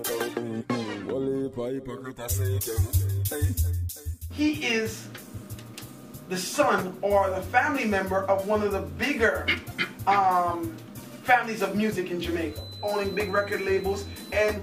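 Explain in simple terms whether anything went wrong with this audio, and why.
From 12.44 s to the end, at 14.62 s, a thin feedback whistle near 4 kHz sits quietly beneath the sound. It is likely a speaker-to-microphone loop hovering at the edge of feedback. Unlike a low, rock-steady electrical hum, it is high-pitched, swells and fades slowly, and never builds into a howl.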